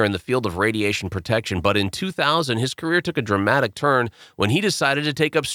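Listening through the speech recording, nothing stood out as a technical fault at any point.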